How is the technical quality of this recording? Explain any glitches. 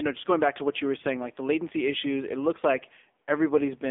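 The quality is poor. Throughout, the speech sounds thin, buzzy and synthetic, with nothing above about 3.7 kHz and a band of roughly 250 Hz to 3.6 kHz. That is heavy AMR narrowband mobile codec damage, consistent with a low-bitrate mode around 6.7 kbps, where a pulse-driven vocal-tract model rebuilds the voice coarsely.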